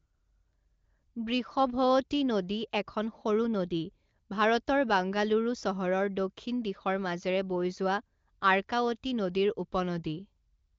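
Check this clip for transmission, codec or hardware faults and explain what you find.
No transmission, codec or hardware faults can be heard in this speech clip. It passes through the AMR wideband (HD Voice) codec, with nothing above about 7.5 kHz and at most faint coding traces, which points to one of its higher bitrates.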